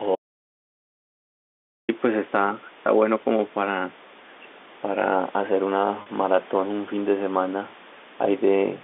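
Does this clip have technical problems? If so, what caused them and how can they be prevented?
Yes. From 0.15 to 1.89 s the sound drops out to dead silence for about 1.7 s, with no room tone. This is an audio dropout to silence, likely from a lost input while recording continued. Secure cables and links, and monitor input levels during capture.

At 2.83 to 2.87 s the speech dips by about 5 dB for roughly 40 ms. This is speech suppressed in double talk, likely an echo canceller ducking the talker while the far side spoke. Use headsets or a better-tuned echo canceller to reduce overlap suppression.

At 6.02 to 6.06 s there is a 40 ms gap bridged by a repeated pitch period, giving a brief held, buzzy tone. This is packet loss with pitch repetition, which fits two lost 20 ms packets on this narrowband telephone line. Improve network stability or add forward error correction and a jitter buffer.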